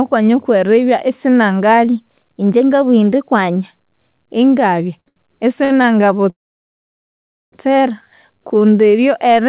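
From 1.84 to 3.64 s the speech runs about 5.7% fast and sits roughly 96 cents sharp, close to a semitone. This is likely a drift correction step: clock-matching software raised the playback rate in a single jump to drain excess buffered audio. Speed and pitch move together, which is what gives the voice its abrupt detuned quality rather than a tempo change alone.

Between 5.00 and 5.86 s there are four short stalls from late packets. At 5.00 s the last sound is held for 62 ms, at 5.08 s for 78 ms, at 5.64 s for 58 ms, and at 5.82 s for 20 ms. Each time the jitter buffer ran dry, and the receiver stretched the final fragment until the next packet arrived. Playback then resumes exactly where it stopped, so nothing is lost. Each stall is heard as a sound held too long, with a slight buzz or dip.

From 6.30 to 7.54 s a call audio freeze inserts about 1.2 s of delay. The last sound carries on briefly as a fading buzz or hiss, and the remaining 1.18 s is silence. 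When the delayed packets arrive, the speech resumes from the same point with nothing missing. The likely cause is packets held up in transit long enough to empty the jitter buffer completely. Throughout the clip the call path limits the band to nothing above 4 kHz, which points to G.711 A-law at 64 kbps.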